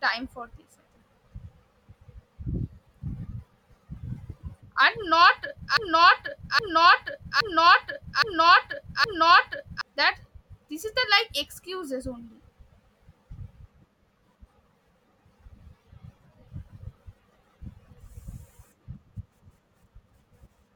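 A broken-record loop runs from 5.77 to 9.81 s: a 0.82 s fragment repeats exactly five times, likely a stalled stream, before "that this is the".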